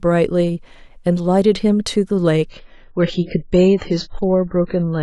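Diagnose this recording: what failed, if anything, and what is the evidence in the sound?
The failure is at the network stage: the adaptive stream dropped to a lower bitrate from 2.49 s to the end. Quality falls abruptly with no gap, nothing remains above 7.5 kHz, and coding artefacts rise, which fits a switch from a high-rate to a very low-rate AAC rendition.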